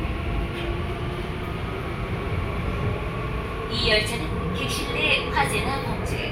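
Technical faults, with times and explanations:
No technical faults can be heard anywhere in this recording of sounds. There is nothing here that calls for a time or an explanation.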